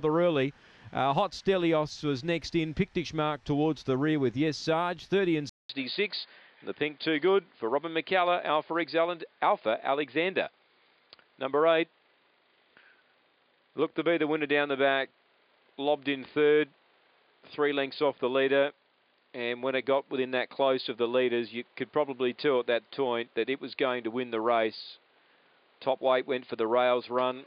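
At 5.49 s a 200 ms gap precedes duller, band-limited sound with nothing above 4.9 kHz and a new, faint noise floor, likely an input switched to a poorer device.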